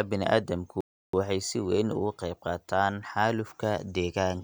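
A speech clip with a playback stall: at 0.81 s the sound cuts off mid-flow and stays silent for about 330 ms until 1.13 s, likely because the player ran short of data or its thread was blocked. The waveform shows a flat line and the spectrogram a blank vertical band.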